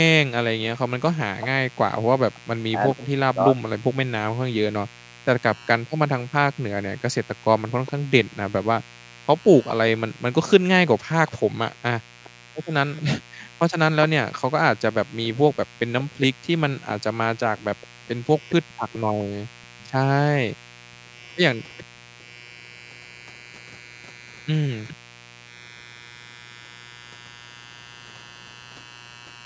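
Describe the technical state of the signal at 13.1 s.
At 13.1 s a steady, raspy buzz sits under the speech, roughly 25 dB below it. This is mains buzz: sharp 60 Hz switching spikes, twice per cycle, spread harmonics from the low end up into the kilohertz range. It is present throughout the recording.

The room sound also dips sharply here, by as much as about 40 dB, and recovers moments later. This is background gated by the echo canceller. From 5.2 s to 25.45 s, whenever the far-end loudspeaker played, the canceller pulled the microphone down hard, about four seconds of dropouts in total.

A faint, delayed copy of the speech trails it by 416 ms, around 30 dB down. This is echo leak, running from 5.55 s to the end. The likely cause is a loudspeaker-side echo canceller that missed part of what its microphone picked up and sent it back. The call's microphone processing band-limits the audio to 8 kHz, which is expected.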